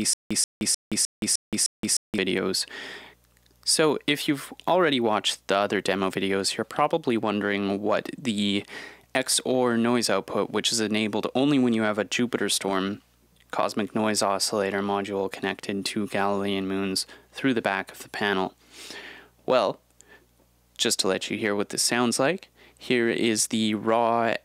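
From the start to 2.18 s, the playback likely stalled, each retry replaying its last fragment and then running dry. The result is stutter with silent gaps: a 134 ms burst repeats six times, with 172 ms of digital silence between, every 306 ms.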